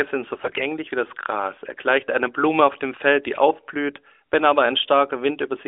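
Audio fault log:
0.34–0.63 s, AMR bit errors: a weak link flipped many unprotected bits in the 12.2 kbps narrowband frames, misplacing excitation pulses, so the speech turns briefly hoarse, scratchy and gargly.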